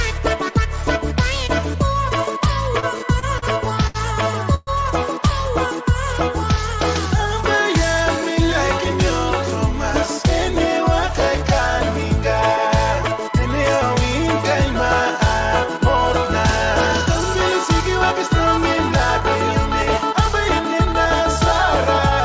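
From 2.8 to 4.7 s the audio shows repeated stalls (stutter): packets arrived late, so the jitter buffer ran dry seven times. The receiver stretched the last sound across about 312 ms, the longest gap 126 ms, nothing lost. The sound drags and hiccups, all band-limited to 8 kHz.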